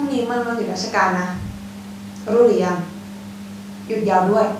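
No technical faults are audible anywhere in the speech recording.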